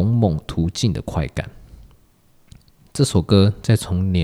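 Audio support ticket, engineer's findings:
No audible faults found.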